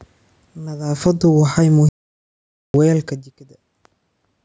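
From 0.75 s to 2.92 s the level slides down by about 11 dB: automatic gain falling. The gain control judged the input too loud or its background noise too strong and pulled its gain back gradually. Unlike a talker moving relative to the microphone, which also happens around 1.0 s, the room noise sinks by the same amount as the speech, so the whole signal is being turned down, not just the voice getting farther off.

Inside that slide, from 1.89 s to 2.74 s, the output goes completely silent for 854 ms and then picks up again. This is a playback stall, most likely the player running short of data or its thread being held up. Unlike a dropped packet or a brief dropout, which would leave a short click or gap of a few tens of milliseconds, this is one long, dead-quiet hole. The background vanishes with the speech, and the sound resumes only when playback recovers.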